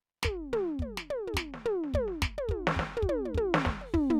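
No technical faults can be heard in this music.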